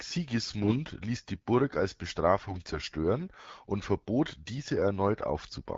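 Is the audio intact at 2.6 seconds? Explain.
No. From 2.48 to 2.79 s the sound shows AMR bit errors: flipped bits in the weakly protected parts of the frames, roughly a few percent, misplace excitation pulses and skew pitch, gain and spectral values, so level and pitch hold while the sound turns hoarse, scratchy and gargly.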